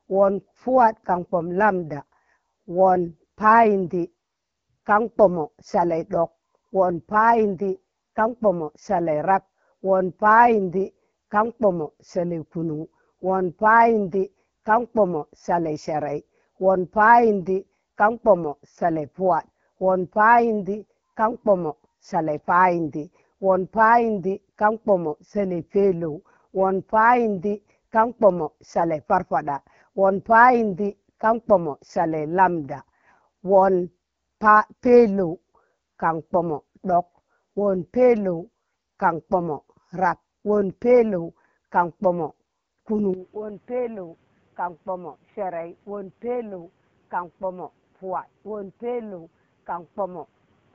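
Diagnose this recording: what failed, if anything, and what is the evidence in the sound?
AMR wideband (HD Voice) codec, throughout the clip, at the codec stage. The speech has a rough, raspy grain from start to finish, which fits the 8.85 kbit/s mode, one of the two lowest rates. At that budget the pulse-driven vocal tract model leaves coarse errors in the band up to 6.4 kHz. The 6.4 to 7 kHz region is synthetic shaped noise, so the top end sounds hissy rather than detailed.

Input switched to a poorer device, from 43.14 s to the end, at the capture stage. The sound suddenly turns dull and boxy, with nothing above 3.8 kHz, and drops by roughly 10 dB. A new noise floor appears around 30 dB below the speech. There is no gap at the change. This points to the system having likely moved its input mid-recording to a narrower-band microphone or a headset's call profile.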